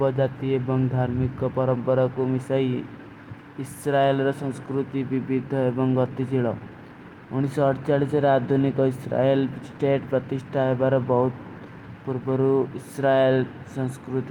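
No technical faults are audible.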